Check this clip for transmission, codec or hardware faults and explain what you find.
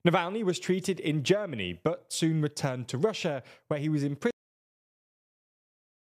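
There is one fault, a cut-off end. At 4.31 s, just after "where he was", the speech stops mid-sound. It drops straight to digital silence, with no decay, until the clip ends. The final buffers were never written or played out, so the tail is simply missing.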